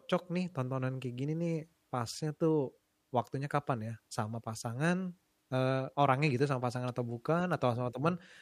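Nothing in this speech recording points to a technical fault in the signal at any point.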